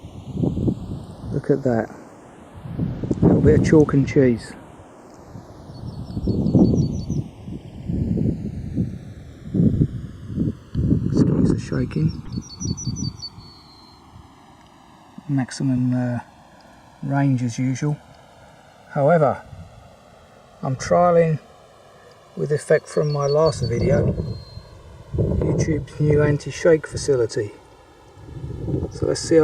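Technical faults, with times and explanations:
Throughout, channels drifting apart: separate clocks roughly 100 ppm apart slide the interchannel delay to about 2 ms, so mono sums show slowly sweeping comb notches, heard as gradual flanging.
9.74–9.77 s, 12.25–12.28 s, 21.41–21.44 s, corrupt frame decoded: damaged compressed frames played anyway misplace energy briefly, giving short chirps or noise bursts, loudest first (about −15 dBFS), faintest last; spectrograms show stray narrow blocks.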